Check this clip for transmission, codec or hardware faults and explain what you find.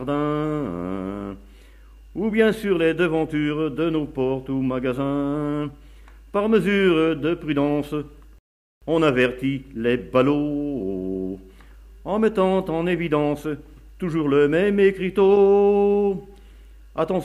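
One fault: a rebuffering stall from 8.38 to 8.82 s, where playback ran dry and waited for data, inserting about 0.43 s of silence before resuming exactly where it stopped.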